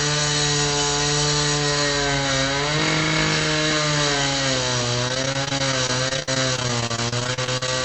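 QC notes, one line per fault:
5.08–7.68 s, repeated packet loss (robotic sound): the sound turns choppy, with about thirty short dropouts of up to 49 ms. Each lost stretch is patched by extending the previous sound, so about a fifth of this span is filler instead of real audio.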